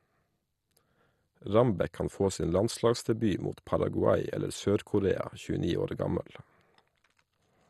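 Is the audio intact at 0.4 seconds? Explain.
No. At 0.4 s, as throughout the speech, the likely cause is MP2 compression at a starved bitrate, consistent with about 64 kbps. Upper sub-bands are switched off, leaving nothing above 12.2 kHz, and the remaining bands are coarsely quantised, giving dull, gurgling, granular distortion.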